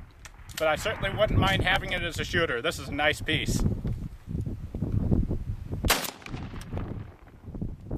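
From 1.72 to 1.98 s there is a burst of processor overload crackle. The processing could not keep pace with its short buffers, and around seven deadlines in that quarter-second were missed. Each missed block was skipped outright, leaving a small hole with abrupt edges. The spacing of the clicks fits a buffer of roughly 3 ms. Heard together, the holes form a gritty, tearing crackle over the sound that stops once the load eases.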